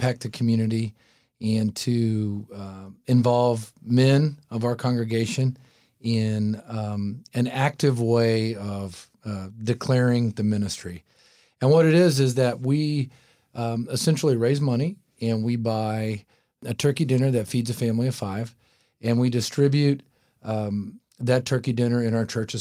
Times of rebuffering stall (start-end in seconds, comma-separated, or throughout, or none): none